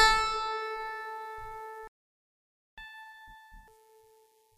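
It's a short music clip that stops dead at 1.87 s and stays silent for about 0.9 s, until 2.78 s, a playback stall. The likely cause is the player running dry of buffered data or its output thread getting blocked, so nothing reached the output for that stretch. When the music picks up again at 2.78 s, it's rushing. That's catch-up at higher speed: the player resamples its backlog to play at 2x speed, which also pushes the pitch up by around ten semitones. It holds that until 3.68 s to claw back the lost time, then drops back to normal speed and pitch.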